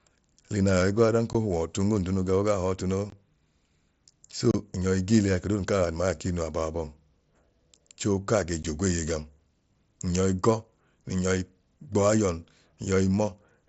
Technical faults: unconcealed Bluetooth headset packet loss

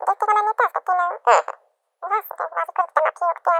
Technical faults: audio read two samples at a time (double speed)

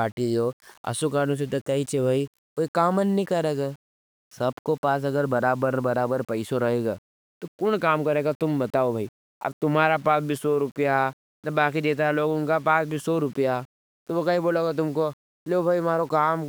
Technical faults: none

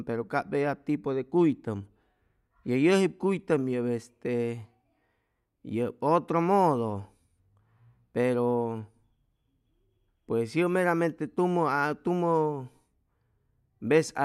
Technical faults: none

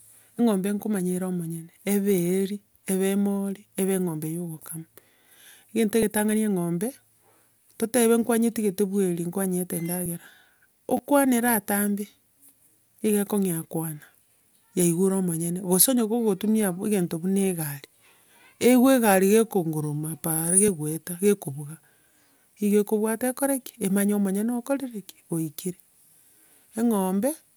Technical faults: damaged data in a compressed stream; repeated buffer

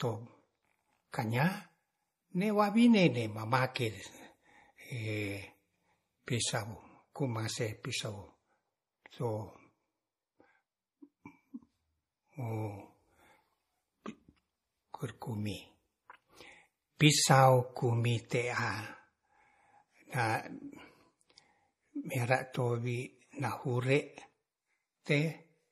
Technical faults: MP3 compression; pre-echo

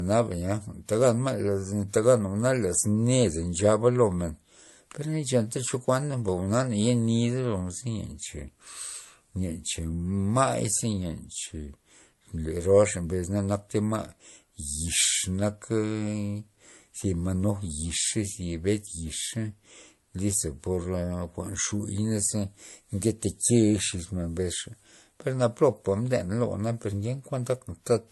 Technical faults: transcoding between lossy codecs

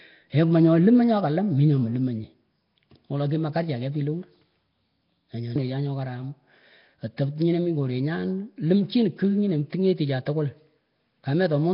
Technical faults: Nellymoser compression

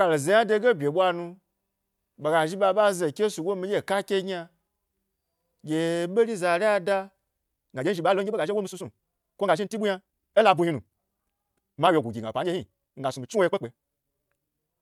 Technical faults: time-stretched section

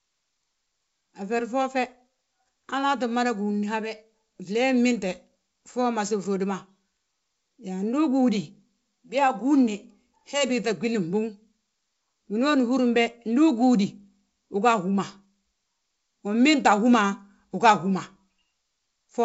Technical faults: none

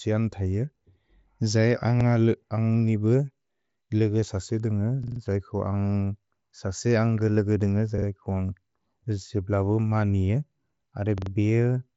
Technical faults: repeated buffer

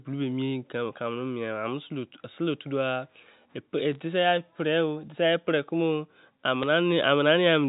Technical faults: bit errors on a digital phone line

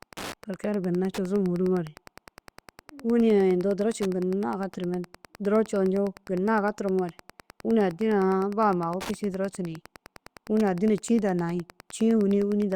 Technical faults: Wi-Fi interference

